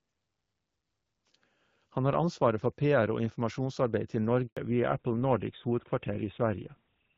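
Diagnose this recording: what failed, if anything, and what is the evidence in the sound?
The failure is at the network stage: a handover gap at 4.47 s. The speech cuts off abruptly and there is 100 ms of silence until 4.57 s. During a handover, the call moves between networks and no speech frames arrive while the new link is set up. Anything said in that window is lost, and the speech resumes only once the second link starts delivering frames.

From 4.57 s to the end, the call processing stage shows a fallback to narrowband. Before the gap, the light, airy top end fits the AMR wideband (HD Voice) codec at around 12.65 kbit/s, with only light coding damage. After the gap, everything above 4 kHz is gone and the speech sounds duller and coarser. This points to the new link negotiating an older narrowband codec, likely GSM full rate.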